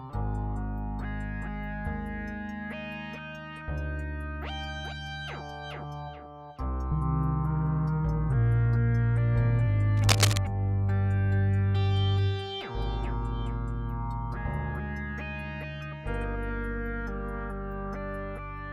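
From 9.97 to 10.41 s, a dense, irregular burst of scratching and rustling sits on top of the sound, roughly as loud as the sound itself. This is cable scratch noise, likely from a worn cable or connector being moved so its contact resistance fluctuated. It is uneven and crackly rather than a steady hiss or isolated clicks.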